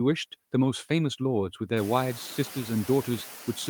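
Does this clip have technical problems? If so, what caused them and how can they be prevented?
Yes. The clip has noise suppressor artifacts throughout. The suppressor estimates which frequency bands hold steady noise and turns them down frame by frame, cutting the noise by about 5 dB. The noise floor dips in the gaps and comes back up under the speech, so the background pumps along with the talking. This is easier to hear after about 2 seconds, when the room noise rises by roughly 20 dB to sit about 18 dB below the speech. To prevent it, lower the room noise at the source and use a gentler or better-tuned suppression setting.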